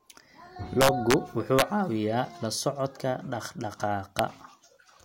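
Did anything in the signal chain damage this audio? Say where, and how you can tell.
Yes. An integer overflow in a fixed-point gain or sample-format conversion stage wrapped peaks that should have been limited. Instead of flattening at full scale, each over-range sample flipped to the opposite sign. The result is violent cracks, much harsher than clipping, across 0.81–1.14 s where the speech peaks were pushed about 5 dB over, again at 1.59–1.62 s at about 3 dB over, and as a single crack at 4.19 s where a peak just reached the limit.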